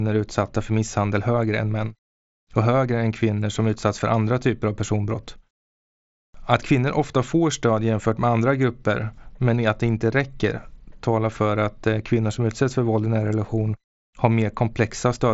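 No technical faults occur anywhere in this speech recording. It has passed through a Bluetooth mSBC headset codec, which leaves nothing above about 7.7 kHz and adds a light trace of that codec's grain.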